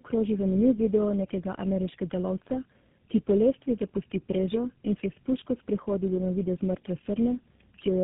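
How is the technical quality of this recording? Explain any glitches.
The quality is poor throughout. Tandem speech coding runs the whole clip: the speech passed through three speech codecs in a row, likely through GSM full rate, G.729A, then GSM again, each coder compounding the last. It sounds rough, muffled and warbly, with nothing above 3.7 kHz.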